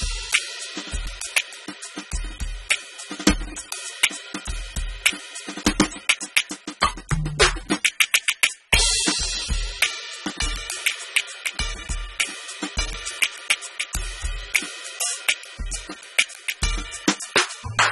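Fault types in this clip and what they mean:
AAC compression: The music has nothing above 11.8 kHz and sounds dull and smeared, with plainly audible warbling. The likely cause is low-bitrate AAC-LC, around 24 kbps.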